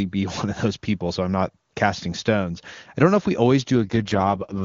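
Near the end, from 3.76 s to 4.62 s, the speech turns rough, buzzy and synthetic, without losing any of its high band and with no break in the sound. This is an AMR rate drop. The HD Voice (AMR-WB) link, clear before this point at what sounds like 23.85 kbit/s, falls to a much lower rate, consistent with 6.6 kbit/s. At that rate too few bits remain for the voice model, so the raspiness lasts to the clip's end.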